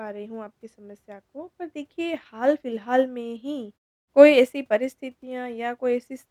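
This speech clip has no technical faults that a listener can hear.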